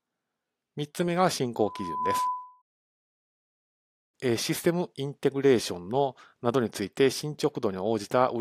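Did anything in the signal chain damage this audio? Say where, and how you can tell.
Yes. Loudspeaker feedback squeal in the analogue acoustic path: from 1.59 s to 2.62 s a 1 kHz tone swells over roughly half a second to about the level of the speech. The microphone re-captured its own loudspeaker, and loop gain above unity at 1 kHz let that frequency run away. A spectrogram shows a single bright horizontal line.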